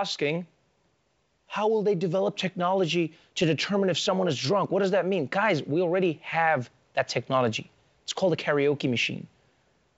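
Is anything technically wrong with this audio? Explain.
No, no technical faults heard.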